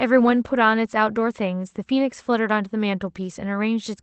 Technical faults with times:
none

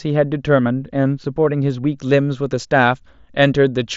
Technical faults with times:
0.00-2.00 de-emphasis applied wrongly

